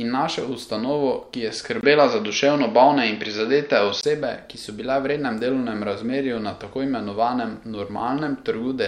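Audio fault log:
1.81–4.03 s, input switched to a poorer device: after "našel ustanovo ki je" a 20 ms gap leads into dull, boxy speech with nothing above 6.4 kHz, a level shift of about 5 dB and faint new background noise, clearing before "ki so bile v"; likely a narrower-band microphone took over.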